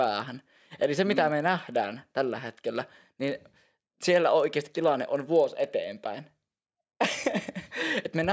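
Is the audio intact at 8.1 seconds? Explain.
No. At 8.1 seconds, as throughout the speech, a resampler restarted on every block is audible: each 40 ms block was converted from 44.1 kHz to 16 kHz without its neighbours, leaving edge errors heard as a 25 Hz ticking buzz under the voice.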